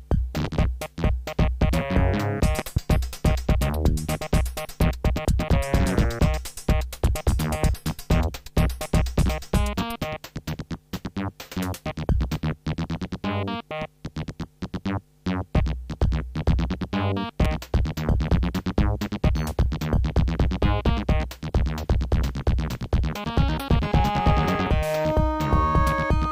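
A loud pop arrives at 0.45 to 0.47 s, peaking about 10 dB above the sound. A second event, from 2.59 to 2.79 s, is a double pop, about 15 dB up. A third single pop lands at 17.45 to 17.47 s, again about 15 dB above. Each is a sharp thump over the sound, which continues underneath. The likely cause is a sudden voltage step or pulse, from a plug, switch, static or driver glitch, entering the signal path.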